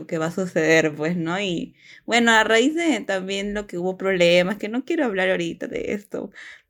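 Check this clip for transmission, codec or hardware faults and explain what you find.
No faults can be heard anywhere in the speech. There is nothing to point to or explain.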